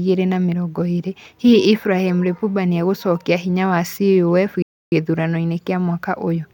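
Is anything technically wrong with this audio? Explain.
Yes. At 4.62 s the speech drops abruptly to silence and stays silent for about 297 ms, resuming at 4.92 s. This is likely a Bluetooth stall: radio interference delayed packets on the wireless link, the receiving headphones' playback buffer emptied, and output halted until retransmitted packets arrived to refill it. The result is a clean gap of nearly a third of a second inside the speech, with the audio continuing once data flow recovered.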